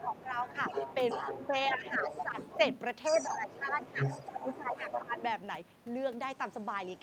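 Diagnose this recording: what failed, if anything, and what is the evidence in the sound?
The failure is in call processing, at the echo cancellation stage. A second voice, the other side's voice leaking through, runs under the talker from 0.0 to 2.79 s and again from 3.14 to 5.32 s, sitting only about 5 dB below the main speech. That is loudspeaker output re-entering the microphone and surviving cancellation. The likely cause is an adaptive filter that never converged on this echo path, so too much residual echo is passed on.

The same stage produces speech suppressed in double talk. The talker's level drops by roughly 10 dB at 0.03 to 0.29 s, 1.2 to 2.6 s, 3.24 to 3.99 s and 4.32 to 5.2 s. Each dip falls within a leakage stretch, where both voices are present at once. The affected portions add up to about 0.8 s in the first window and about 1.4 s in the second. The likely cause is the residual-echo suppressor treating near-end speech as echo during overlap and attenuating everything together.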